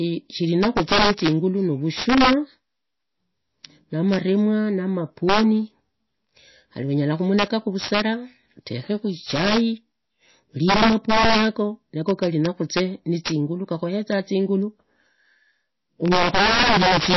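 Integer overflow runs through the whole speech recording. Loud peaks driven about 11 dB past the limit wrap around to the opposite sign instead of being held flat, so a small share of samples jump across the full range. The result is violent, sharp cracks on the loudest moments, far harsher than the dull flattening of ordinary clipping.

From start to finish the treble stops dead at 5.8 kHz, and the sound has a watery, swirling quality, with faint components flickering in and out and consonant attacks smeared. This points to heavy lossy coding, likely MP3 at a low bitrate near 24 kbps, rather than a simple low-pass filter, which would dull the sound without the swirl.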